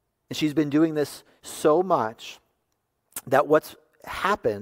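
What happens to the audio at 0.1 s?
Nothing goes wrong at 0.1 s: the speech plays through that moment intact, with no dropout, click or distortion.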